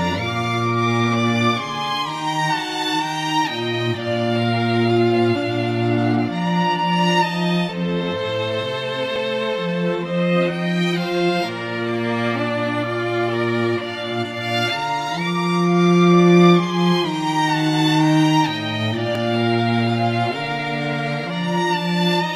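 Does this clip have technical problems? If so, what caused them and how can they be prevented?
Yes. There is audio missing between chunks at 9.16 and 19.15 s: a few milliseconds of sound skip out, likely where 10-second recording chunks were closed and reopened. To prevent it, record continuously or overlap chunk boundaries so no samples drop during handover.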